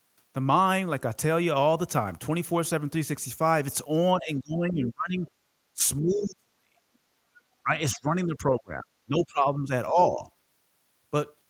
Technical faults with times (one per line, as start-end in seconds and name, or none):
4.15-5.28 speech suppressed in double talk
5.74-6.73 speech suppressed in double talk
7.63-10.25 speech suppressed in double talk